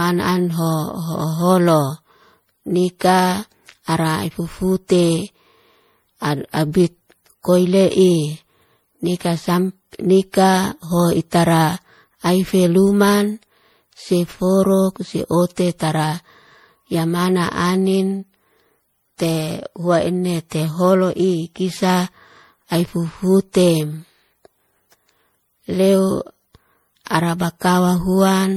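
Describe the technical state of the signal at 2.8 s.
At 2.8 s the speech carries generation loss that runs through the whole clip, likely from repeated MP3 encoding, perhaps five passes at a rate that fits about 64 kbit/s. Each pass re-quantises on a shifted frame grid, so the sound turns swirly, hollow and smeared, with blurred consonant attacks and nothing above 20.8 kHz.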